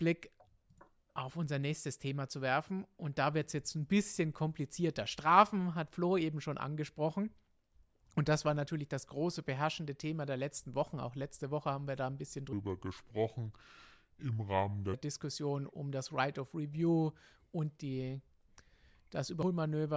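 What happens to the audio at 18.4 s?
Nothing goes wrong at 18.4 s; the speech carries on intact through that moment with no dropout, click or distortion.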